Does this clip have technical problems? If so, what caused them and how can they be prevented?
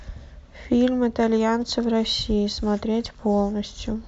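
No, there are no technical problems to hear in this speech clip. With nothing going wrong, there is no cause to explain and nothing that needs preventing.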